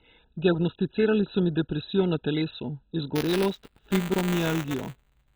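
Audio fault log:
Throughout, MP2 compression: the speech is dull and smeared, with a gurgling, granular texture. The upper sub-bands have been switched off entirely, and the few bands left flicker and are quantised very coarsely. The damage is heavy, which fits a very low bitrate of around 16 kbps. The likely cause is an MP2 encode done with far too few bits to cover the spectrum.
3.15 to 5.36 s, buffer tearing: straight after "mi depresijo na telesu" a robotic rattle at about 200 Hz comes in and stays until the end, riding on the speech. The writer and reader of the playback ring buffer have drifted, so they cross inside each 5 ms period. A small slice of every period, a few percent, plays audio from about 15 ms earlier, with hard joins at both edges. Those joins repeating 200 times a second make the buzz.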